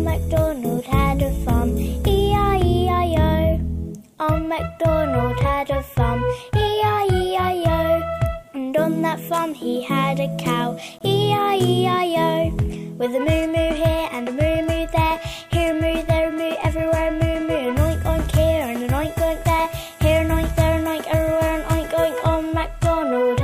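A brief hard-edged dropout to silence cuts into the audio from 10.99 to 11.01 s, about 22 ms long. This is a gap between stream segments: timestamps of adjacent 6.0 s segments leave a small hole the player pads with silence, adding time without removing any audio.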